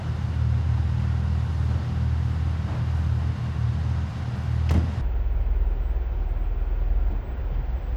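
From 5.01 s to 7.97 s the sound plays at half speed, a full octave low. This is stereo read as mono: interleaved left and right samples are played back one after the other as a single channel.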